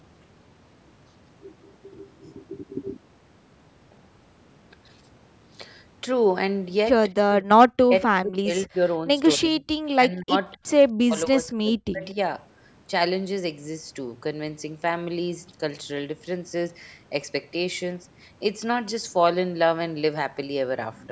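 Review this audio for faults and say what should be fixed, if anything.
Speech suppressed in double talk occurs at 7.26–8.79 s, 9.35–9.62 s, 9.96–10.62 s and 11.02–12.17 s. In each span the speech sinks in level, falling by about 40 dB at its deepest in the first and last spans, and by about 20 and 25 dB in the middle two. Within each span the speech is only partly hit, for about 0.7 s at most. The likely cause is an echo canceller that, with both ends talking, treated the near talker as loudspeaker echo and pulled everything down. The call's microphone processing, which leaves nothing above 8 kHz, is not involved. To prevent it, tune the canceller's double-talk detection so near-end speech is kept while the far end is active.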